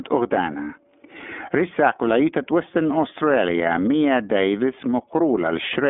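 From start to finish the speech carries iLBC codec damage. Nothing above 3.7 kHz survives and the line band runs from 250 Hz to 3.5 kHz. The voice sounds plainly rough and synthetic because each 30 ms frame is coded independently, which fits the 13.33 kbps mode. That frame-level graininess sets it apart from simple telephone band-limiting.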